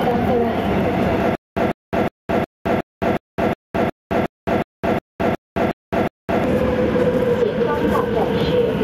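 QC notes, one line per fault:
throughout: gain pumping. The gain swings by about 5 dB, pulled down under every loud sound, squashing dynamics, likely from gain set far too high with a fast limiter clamping down. On a waveform, the noise floor visibly rises and falls between loud peaks.
1.35–6.44 s: stutter with silent gaps. A 150 ms fragment repeats 14 times, each followed by 213 ms of digital silence (a 363 ms cycle), and the audio meant for that span is lost. This is likely a stalled stream replaying its last fragment on each retry. A spectrogram shows identical blocks separated by fully blank columns.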